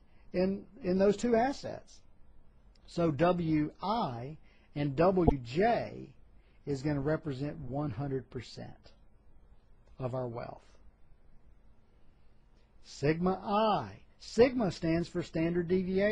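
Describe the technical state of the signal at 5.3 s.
At 5.3 s there is damaged data in the compressed stream. It runs from 5.24 to 5.32 s, about 84 ms. Some of the encoded bytes in that stretch are wrong, either lost, zeroed or overwritten. The decoder misreads the affected frames and loses sync, then hunts for the next valid frame header. The result is a short synthetic blip or squawk that cuts across the sound before normal decoding resumes.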